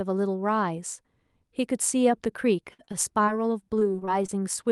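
Repeated packet loss (robotic sound) occurs from 2.73 to 3.29 s and again from 3.79 to 4.68 s. Lost packets were repeatedly patched by extending the last sound, with gaps up to 54 ms, leaving the speech choppy, with pieces missing.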